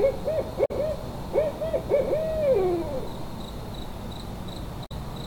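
At 0.64 s there's a quick glitch lasting about 70 ms, and the same thing comes back at 4.85 s. That's damaged data in a compressed stream: some bytes in the encoded file got lost or overwritten, so the decoder misreads those frames, loses its place, and hunts for the next valid frame header before it picks the audio back up. The garbled frames come out as that short blip.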